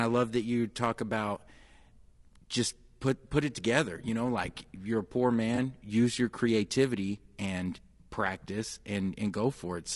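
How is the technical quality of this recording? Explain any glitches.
The technical quality is compromised throughout by codec damage, with one brief dropout in the middle.

Low-delay AAC compression runs through the whole clip, most likely AAC-ELD, the low-delay AAC used for video calls, at a rate that sounds like around 32 kbps. Its very short frames resolve pitch harmonics poorly and use up bits, so the speech comes out plainly rough and grainy, with noise filling the gaps between harmonics and a thin, synthetic-sounding top band.

AAC frame loss with concealment occurs from 5.55 to 5.58 s. The decoder lost data, which fits a single missing frame of about 20 ms. It patched the gap by reusing the last good spectrum with scrambled or interpolated detail. Because the gap is so short, the sound does not fall silent. Instead there is a momentary smeared, noisy or phasey patch before normal decoding resumes.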